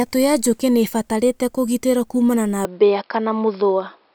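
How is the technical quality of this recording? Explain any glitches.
The recording has one clear fault. From 2.65 s to the end, right after "ibatarĩte kũgĩtĩrwo kuumana na", the speech suddenly turns dull and boxy. Nothing above 5.3 kHz remains. The likely cause is an input switched to a poorer device with a narrower band. There is no gap at the switch, and the level stays steady. A faint new background noise appears.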